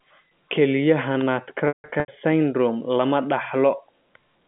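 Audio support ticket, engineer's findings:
Packet loss with pitch repetition, 1.68 to 2.08 s. About 280 ms dropped, scattered across 400 ms, longest gap 160 ms. Short drops come out as held, buzzy repeats. The long one fades to silence, then cross-fades back in. Points to roughly 14 lost 20 ms packets, with receiver concealment looping the last pitch period. The narrow phone-band sound around it is the G.711 A-law line, 150 Hz to 3.5 kHz.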